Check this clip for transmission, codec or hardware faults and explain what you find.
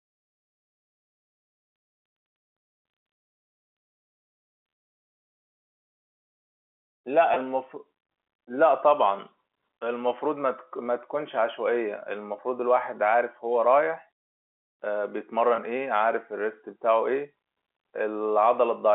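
Two brief dropouts in the speech show packet loss with pitch repetition, at 7.34 s and 15.56 s, heard over a G.711 telephone line whose 250 to 3400 Hz band gives the narrow, phone-like tone throughout.

At each point the speech briefly holds and buzzes rather than cutting to silence. About 20 ms of signal went missing, which fits the loss of a single packet. The receiver filled the gap by replaying the last pitch cycle, and the stretch is too short for that copy to fade to silence before the speech resumes.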